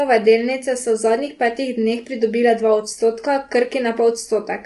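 From start to finish the speech carries plainly audible coding damage, most likely low-delay AAC compression of the AAC-ELD kind used for calls, at a rate that fits around 32 kbps. At that low rate its coarse quantization leaves the voice sounding rough and grainy, with hiss filling the gaps between harmonics and nothing above 11.6 kHz. A plain low-pass filter would only dull the top, while ordinary low-bitrate AAC would also smear attacks.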